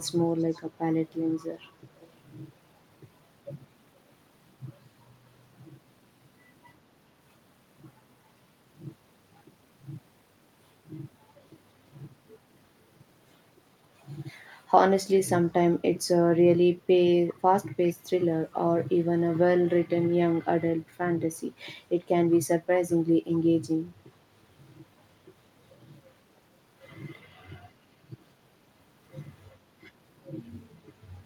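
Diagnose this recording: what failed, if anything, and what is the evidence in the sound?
Echo leak at 0.00–0.63 s, 1.09–2.14 s, 17.29–17.41 s, 17.87–18.53 s and 22.31–22.40 s, a call-processing fault. A faint delayed copy of the speech trails the original by about 397 ms, sitting roughly 30 dB below it and rising to about 25 dB below at 17.87–18.53 s. The likely cause is the far side playing the call on a loudspeaker, with its echo canceller failing to remove the microphone's pickup and sending it back.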